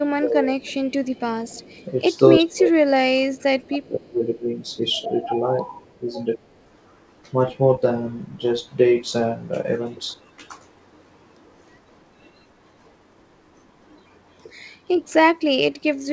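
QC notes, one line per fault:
0.13–0.76 s, 1.11–1.37 s, 2.38–5.30 s, 5.68–6.47 s, speech suppressed in double talk: the voice dips by about 15 dB, and by about 25 dB at 2.38–5.30 s. The likely cause is the echo canceller ducking it while both sides talk. It is a loss of the voice, not an added copy.
0.62–1.84 s, 2.50–2.54 s, 5.70–5.90 s, echo leak: a faint copy of the voice returns 0.30 s later, about 30 to 40 dB down, likely from residual loudspeaker echo. It is an added repeat, not a dip.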